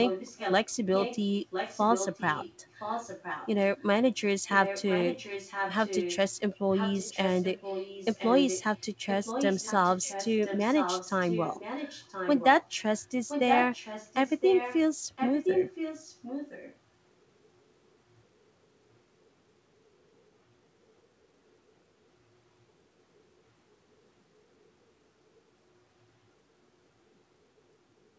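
A speech recording with echo leak. A copy of the speech returns 1.02 s late at 0.04–0.68, 1.01–1.18, 1.5–3.5, 4.48–6.35, 6.71–12.69, 13.04–14.8 and 15.16–16.77 s. It sits about 5 to 10 dB below the speech. Likely cause: a loudspeaker whose echo canceller missed microphone pickup.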